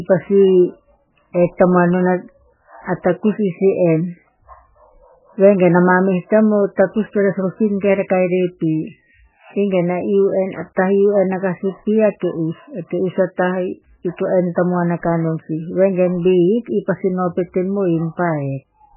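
Throughout the speech, the sound is muffled and watery, with nothing at all above 3 kHz, so sibilants lose their hiss and consonant attacks blur into swirling, metallic chirps. The likely cause is heavy MP3 compression at a very low bitrate, around 8 kbps. Starved of bits, the encoder cuts the treble at a fixed point and drops quieter frequency lines, which flicker in and out from frame to frame and smear every onset.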